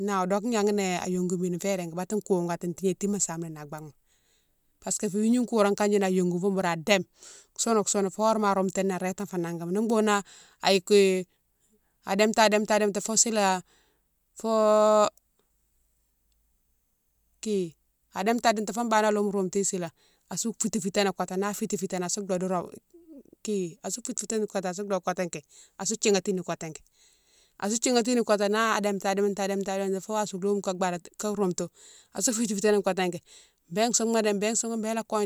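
Listening closely to the speech, nothing stood out as a technical problem at any point.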